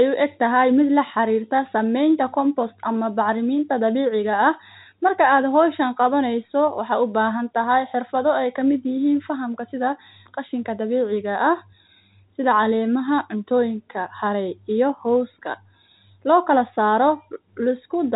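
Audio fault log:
No faults can be heard in this speech recording. It has the narrow telephone sound of G.711 telephone coding, with nothing above 4 kHz and at most a faint grain that rises and falls with the level.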